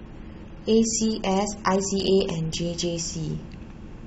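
Speech here, and the first 2.57 s sound dull and smeary, like an adaptive stream starting at a low bitrate of about 27 kbit/s, then jumping cleanly to a fuller 96 kbit/s-ish version.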